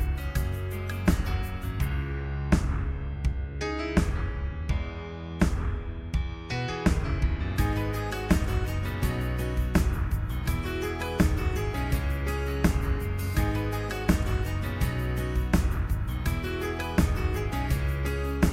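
There are no technical faults to describe in this audio.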